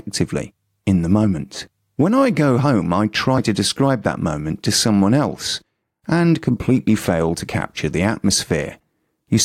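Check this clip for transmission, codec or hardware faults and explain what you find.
There's one codec fault in this speech. Around 3.35–3.39 s, between "I go home I" and "to describe that moment", compressed frames are skipped: roughly 20 ms never decodes, so the audio jumps ahead.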